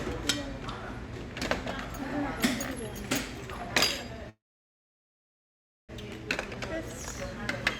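A call audio freeze runs from 4.29 to 5.91 s in this recording of sounds: the last sound smears into a brief fading buzz, then about 1.52 s of silence, likely from held-up packets draining the jitter buffer. Playback resumes where it stopped, nothing lost, now 1.59 s late.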